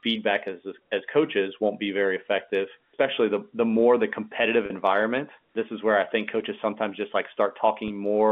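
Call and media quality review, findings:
Packet loss with pitch repetition, 4.66–4.70 s. Roughly 40 ms gap, fits two lost 20 ms packets. Receiver concealment repeats the last pitch period, fading it. Sound briefly held, buzzy, then cross-fades back.

Packet loss with pitch repetition, 7.88–7.90 s. About 20 ms, consistent with one packet. Same concealment: short held, buzzy tone bridging the gap. G.711 A-law line band ends near 3.5 kHz.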